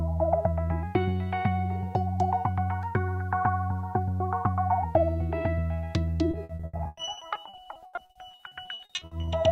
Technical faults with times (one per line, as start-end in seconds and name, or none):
6.31-9.29 repeated packet loss (robotic sound)